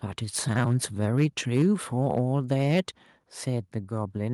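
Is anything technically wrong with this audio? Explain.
Yes. From 0.36 to 0.76 s, 1.02 to 1.26 s, 1.54 to 1.67 s, 2.04 to 2.2 s and 2.51 to 2.8 s the loudest speech turns harsh and crackly. This is likely microphone overload: peaks pushed about 2 to 6 dB past the converter's ceiling get their tops flattened, clipping a few percent of samples.

At 1.62 s, right in the middle of a distorted peak, the speech and background drop suddenly by about 2 dB. That fits the microphone volume being stepped down, with the call software cutting the device's input gain in one jump after hearing clipping.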